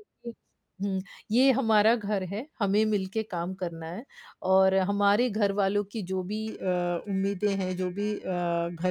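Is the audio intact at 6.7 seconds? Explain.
No. Periodic clock jitter runs from 6.47 s to the end. A roughly 2 kHz wobble in the converter clock adds sidebands, giving the speech a rough, metallic edge.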